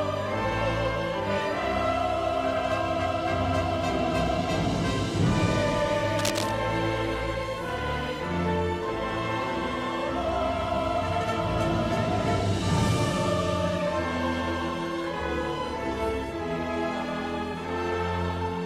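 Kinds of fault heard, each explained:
Cable scratch noise: from 6.15 to 6.51 s, a dense, irregular burst of scratchy rustling sits over the sound, only slightly quieter than it. This is likely a worn cable or connector being moved, its contact resistance fluctuating rapidly for that moment.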